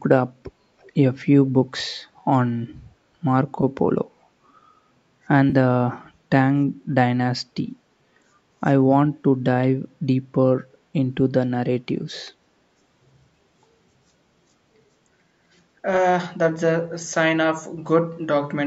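Between 0.81 and 0.92 s a faint ghost of the speech trails in roughly 30 dB below the direct sound, arriving about 323 ms behind it. This is likely an echo leak: a far-end loudspeaker's sound reached its microphone and escaped the echo canceller.

At 3.61 to 3.64 s and again at 5.50 to 5.55 s the speech briefly smears into a noisy, phasey patch, 20 ms and then 30 ms long. This is AAC frame loss with concealment. The lengths fit two and then three lost 10 ms frames, which the decoder filled by reusing the last good spectrum. The short frames suit the low-delay AAC compression of the call path, likely AAC-ELD.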